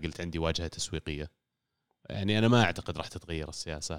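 A short speech recording with nothing technically wrong with it.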